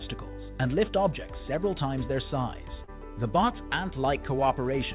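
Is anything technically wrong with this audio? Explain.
Yes, there is one fault. Short concealed packet loss at 2.84 to 2.90 s: about 40 ms of audio arrived too late for the decoder, and the receiver filled 36 ms of the gap by carrying the preceding sound forward before blending back. The result is a brief smear or wobble where the real material is missing, heard through a G.711 call path that leaves nothing above 4 kHz.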